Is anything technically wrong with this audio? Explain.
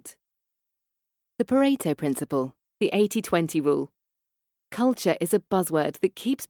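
No, nothing technically wrong can be heard anywhere in this speech recording.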